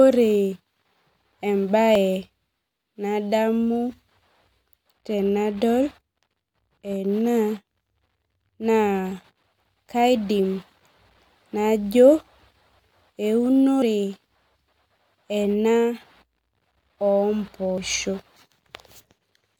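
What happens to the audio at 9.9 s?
At 9.87 s, the recorder or processor has likely dropped a short piece of audio while closing one processing chunk and opening the next, the fault known as audio missing between chunks. A 4-second chunk boundary would fall at this point. Around 40 ms of sound is lost, and the audio on either side is spliced directly together with no silence in the gap. The result is a brief, abrupt skip in the speech.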